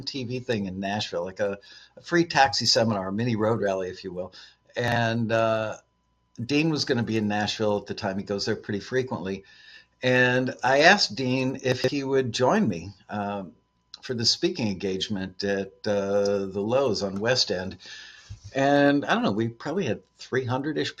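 Sound cut by the noise suppressor at 1.83–2.07 s and 4.28–4.76 s sinks steady material by about 12 dB while sudden onsets survive, unlike a dropout, which silences everything. Chunks out of order follow at 4.88–4.96 s, where a 40 ms chunk plays one chunk late. They return at 11.72–11.88 s, three chunks late. Nothing goes missing, but hard joins break in and the sound jumbles. The suppressor dips recur at 12.94–13.10 s and 13.51–13.99 s.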